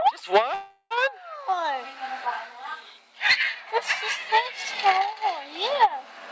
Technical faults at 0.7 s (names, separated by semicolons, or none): call audio freeze